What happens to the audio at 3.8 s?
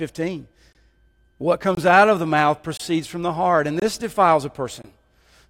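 At 3.80 to 3.82 s the speech breaks off in a gap between chunks: a silent hole of about 23 ms, sitting at a chunk boundary that fits 1.0 s chunks. The sound resumes where it stopped, with nothing dropped, because a stretch of silence was inserted at the join rather than audio removed. It is heard as a brief, hard-edged dropout. On a waveform it appears as a flat line with abrupt edges, and on a spectrogram as a clean vertical blank band.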